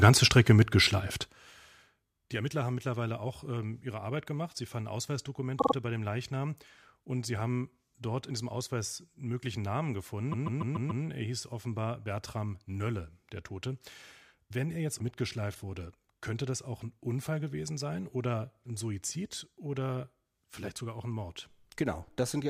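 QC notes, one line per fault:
5.58–5.73 s: repeated frames. A 48 ms block of compressed audio plays three extra times, adding 144 ms, heard as a short stutter.
10.31–11.03 s: repeated frames. A 144 ms block, which fits a run of several codec frames, replays five more times, adding 720 ms as a longer stutter.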